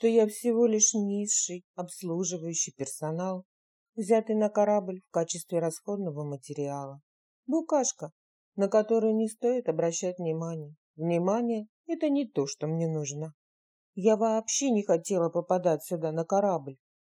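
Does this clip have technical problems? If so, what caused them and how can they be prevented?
No, nothing in this one stands out as a technical problem, so there's no cause to track down and nothing that needs preventing.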